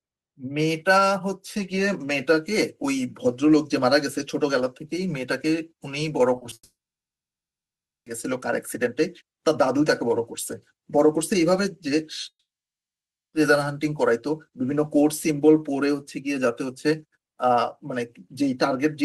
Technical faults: repeated packet loss (robotic sound); long network dropout

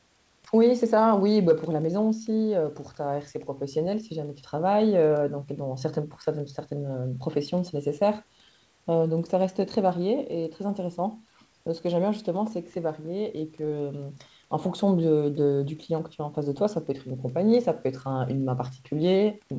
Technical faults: none

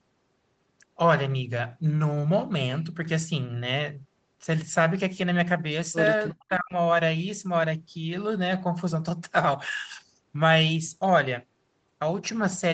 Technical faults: echo leak; speech suppressed in double talk

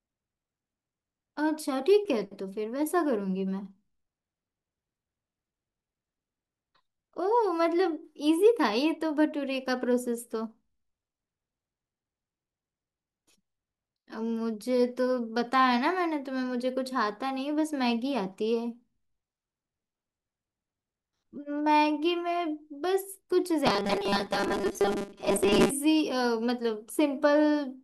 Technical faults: robotic sound from repeated short buffers

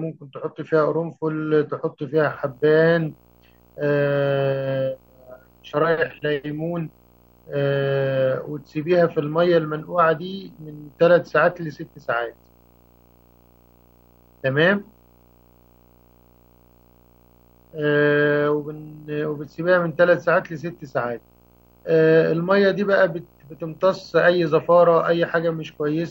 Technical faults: video or display buzz

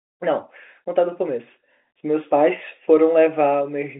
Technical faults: none

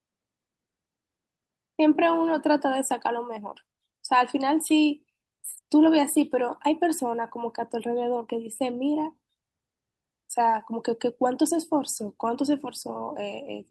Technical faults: none

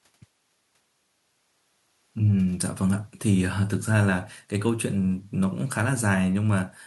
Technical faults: none

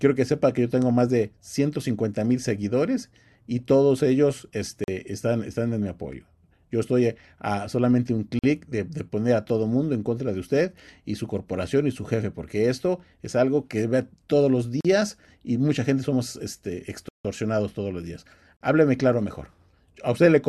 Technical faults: block of digital silence; gap at a join of encoded pieces

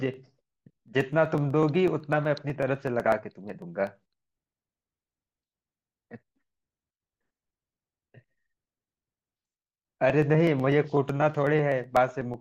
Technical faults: periodic USB or driver dropouts

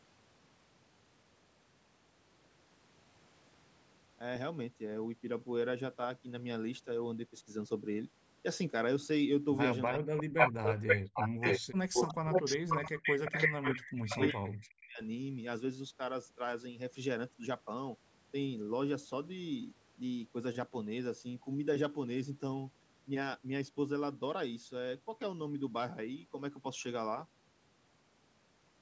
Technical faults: speech suppressed in double talk; echo leak

